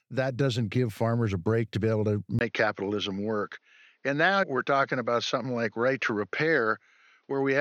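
A speech clip in which, right after "to be able to" at 2.39 s, a 20 ms gap is followed by duller sound with nothing above 6.5 kHz and a faint new noise floor, likely an input switched to a poorer device. A spectrogram shows the high band vanishing there, and the waveform shows a brief flat gap with unchanged level.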